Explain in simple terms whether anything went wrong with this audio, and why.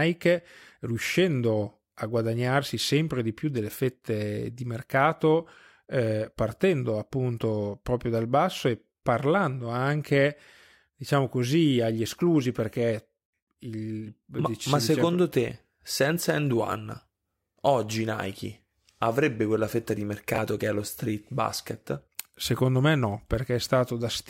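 Something did go wrong, once, at 20.34 to 20.38 seconds, right after "avrebbe quella fetta di" and just before "che è lo street". This fault is called chunks out of order. The speech is carried in small pieces of about 20 milliseconds each. One piece arrived one step late, so it plays after the piece that should follow it. Nothing is missing, but the order is wrong. That leaves three abrupt joins and a brief jumbled moment.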